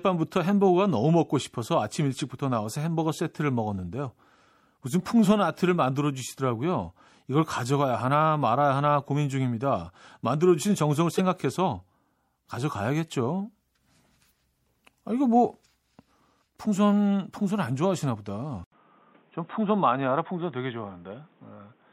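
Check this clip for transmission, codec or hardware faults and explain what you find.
Three faults are audible in this speech clip: lossy encoding throughout, a brief burst of corrupted data, and a late drop in input quality.

MP3 compression: The whole clip was likely encoded as MP3, and the plainly audible damage fits a low bitrate of about 64 kbps. With so few bits, the encoder has cut the treble at a fixed point and dropped weak frequency components, which flicker in and out from frame to frame. The speech therefore sounds watery and swirly, with metallic chirps on sibilants and softened consonant onsets.

Damaged data in a compressed stream: From 11.18 to 11.20 s, part of the encoded stream is corrupted. The decoder cannot read those frames correctly, loses its place, and has to find the next valid frame header before it can recover. This produces a short chirp or blip of garbled sound lasting roughly 24 ms, and the audio may jump forward slightly as decoding resumes.

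Input switched to a poorer device: At 18.64 s, recording likely moves to a lower-quality input device, and that device is used until the end of the clip. An 80 ms silence marks the changeover. From then on, nothing reaches above 3.8 kHz, so the speech turns dull and boxy, and a new background noise appears roughly 35 dB below it. The loudness stays about the same, so the change is heard in tone and noise rather than in level.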